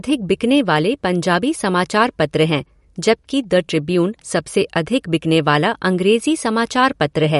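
All the way through, the speech has nothing above 11.2 kHz and a plainly audible watery, swirly quality, with weak detail flickering in and out. That's likely MP3 compression, and the amount of damage points to a low bitrate, somewhere around 50 kbps.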